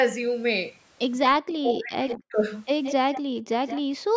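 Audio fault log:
1.27–2.36 s, speech suppressed in double talk: the speech dips by up to about 40 dB, with roughly a second affected in total across the span. This is likely an echo canceller mistaking simultaneous talk from both ends for echo and turning it down.
2.08–2.18 s, 2.83–2.93 s, 3.13–3.22 s, 3.67–3.81 s, echo leak: short copies of the speech, each around a tenth of a second, trail the original by 169 ms at roughly 10 to 20 dB below it. These are likely loudspeaker pickup that the far end's echo canceller did not fully remove and sent back.
3.22–3.43 s, 3.99–4.15 s, background gated by the echo canceller: the room sound falls away by as much as about 40 dB for around 150 ms each time, then comes back. The canceller clamped the microphone hard while loudspeaker audio was playing and released it afterwards.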